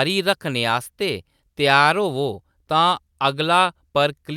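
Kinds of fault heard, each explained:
No technical faults are audible anywhere in the recording.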